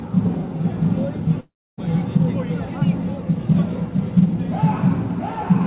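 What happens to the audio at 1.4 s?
At 1.4 s the sound breaks off into a brief buzzy continuation of what came just before, which fades within a fraction of a second and leaves near-silence until 1.79 s, when the audio resumes with that stretch simply gone. This is most likely a long network dropout: packets stopped arriving for about 0.38 s, and the receiver padded the gap with synthesised sound that decays to quiet. The band-limited G.711 call audio, with nothing above 4 kHz, carries on afterwards.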